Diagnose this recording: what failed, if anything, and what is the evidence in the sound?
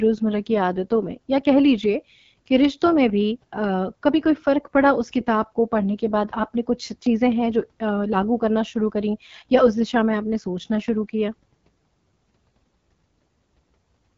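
The codec stage is the problem: this speech runs through the AMR wideband (HD Voice) codec for the whole clip, and the damage is plainly audible throughout. The rough, raspy texture points to one of AMR-WB's two lowest modes, which fits 8.85 kbit/s. At that rate, the pulse-driven vocal tract model can't track the voice closely.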